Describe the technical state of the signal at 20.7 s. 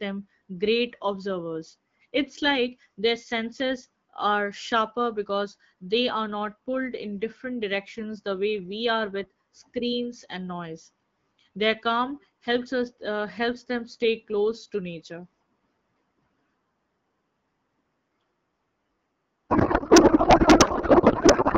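At 20.7 s the speech has given way to garbled noise and warble that barely tracks it. This is a codec payload misread, running from 19.49 s to the end of the clip at 21.58 s. The AMR wideband stream is packed in octet-aligned form but is being unpacked as bandwidth-efficient, so the decoder accepts frames that look valid while reading every field from the wrong bit positions. It produces nonsense parameters instead of speech.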